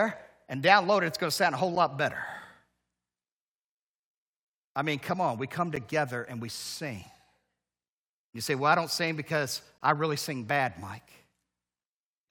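Right after "to sound a whole" at 1.75 s, the speech drops out for a few milliseconds with hard edges: a gap between stream segments. It recurs at 5.76 s, between "come on we come" and "and we sing", and from 9.78 to 9.81 s, after "I don't sing because". Each hole sits at a segment boundary roughly every 4 s, where mismatched time stamps left a sliver the player padded with silence. Nothing's lost, just brief clicky dropouts, the last and longest about 23 ms.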